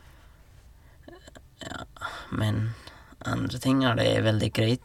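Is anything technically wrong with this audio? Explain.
No, nothing technically wrong can be heard in this speech clip.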